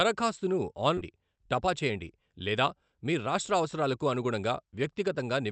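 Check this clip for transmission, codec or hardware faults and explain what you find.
Two faults are audible in this speech clip.

Skip ahead, 0.97–0.99 s: about a second of queued audio was discarded, so playback jumps forward, splicing the two sides together with no gap.

Jitter buffer speed-up, 1.05–5.50 s: the overfilled buffer trims short pitch-period pieces repeatedly, removing about 0.4 s. Speech runs at 109% speed, same pitch, sounding hurried.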